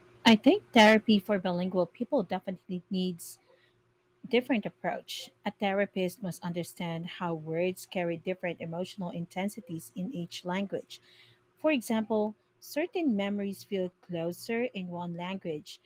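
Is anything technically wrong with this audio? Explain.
Yes, there are two faults.

From 0.77 to 0.94 s there is microphone overload. The speech peaks sit harshly and crackle. The likely cause is an input level about 6 dB too hot for the converter, flattening the waveform tops on around a tenth of the samples.

At 1.29 s the microphone volume is stepped down. Voice and background both drop abruptly by about 6 dB, just before "bilingual people". This is likely the call software reacting to the clipped peak and cutting the device's input gain in one move.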